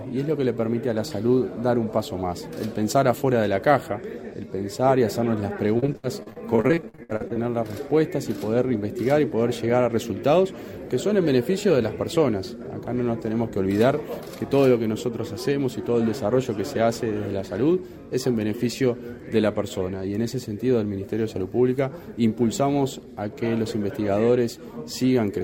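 From 5.77 to 7.37 s the sound turns choppy. This is repeated packet loss, heard as robotic sound. Data kept arriving late or not at all. Each missing stretch was covered by stretching out the last sound received. Then the next hole came almost at once. The ear catches roughly two dozen short holes, the longest 62 ms. About a third of this stretch is patched rather than real, and bits of the audio simply vanish.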